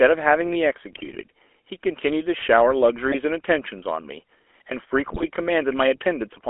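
Speech heard through the GSM full-rate codec throughout, at a quality that fits the original 13 kbps phone coder. The voice is confined to roughly 300 Hz to 3.4 kHz and carries a constant buzzy, gravelly roughness. The codec rebuilds the voice from a vocal-tract filter driven by a sparse, regularly spaced pulse train, so the fine detail of the excitation is lost. That buzz is what separates it from a plain band-limited or muffled narrowband line, which sounds dull but smooth. GSM bit errors strike at 0.92 to 1.23 s, 3.10 to 3.15 s and 5.06 to 5.27 s, where the voice breaks into squawks, pops and gargling. Corrupted filter, pitch or gain values bend the spectrum or spike the level in the affected frames. The sound keeps going, turned harsh and wrong, unlike packet loss, which leaves gaps, repeats or fades.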